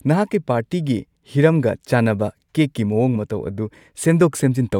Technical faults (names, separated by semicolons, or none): none